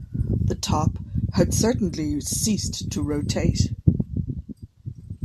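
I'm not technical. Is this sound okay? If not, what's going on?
Yes, nothing stood out as a problem when listening to this speech recording.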